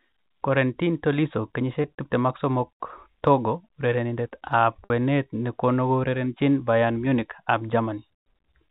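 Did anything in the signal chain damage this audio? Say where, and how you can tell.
Yes. At 1.82 to 1.84 s the speech briefly holds on a buzzy, frozen tone. At 4.84 to 4.90 s a longer buzz fades before speech cross-fades back. That is packet loss with pitch repetition on the network: 20 ms and 60 ms of G.711 audio went missing, consistent with one and three packets. The receiver filled each gap by repeating the last pitch period.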